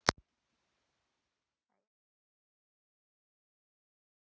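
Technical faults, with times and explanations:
Nothing here calls for a fix; the speech eases out in a smooth, editor-style fade from around 1 s to 1.93 s, with no click or hard edge at the end.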